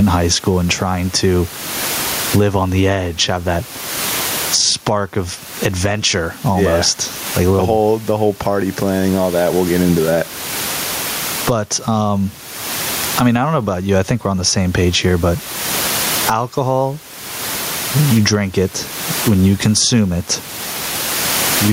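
Gain pumping runs through the whole speech clip. The room noise sits about 30 dB below the speech. The level swings by roughly 25 dB. The likely cause is input gain set far too high, with a fast limiter clamping down.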